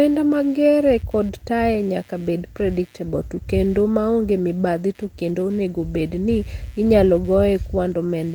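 Through the whole recording, computer activity noise is present. Shifting load in the machine's processor, graphics or peripherals disturbs the ground shared with the audio circuitry, so that activity leaks into the signal as interference. It sounds like a low buzzing, chirping texture pulsing at around 150 Hz, sitting roughly 35 dB beneath the speech. It tracks the computer's workload rather than the talking, jumping up and dropping back under pauses as well as phrases.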